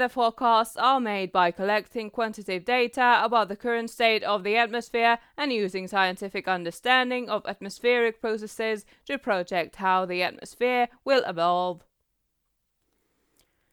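A speech recording with no technical faults to report. There is nothing in it that calls for a time stamp or a cause.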